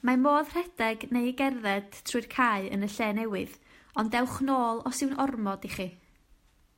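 No technical fault can be heard anywhere in the recording. There is nothing to place in time and no failure to explain.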